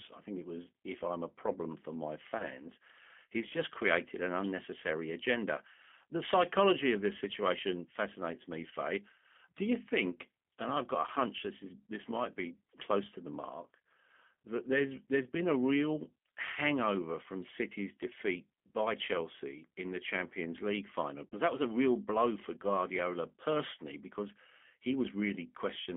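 Throughout, the speech sounds thin, rough and slightly synthetic, confined to roughly 200 Hz to 3.4 kHz. This is G.729 codec damage, consistent with an 8 kbit/s stream. At 2.38 to 2.47 s, just after "a problem for my", a brief buzzy or noisy smear fades out: VoIP packet loss concealed by the speech codec, bridging about 20 ms, which fits one lost packet. At 21.26 to 21.35 s, just before "that was a real", a longer, weakening buzz or noise covers about 60 ms, which fits three lost packets, before the voice recovers.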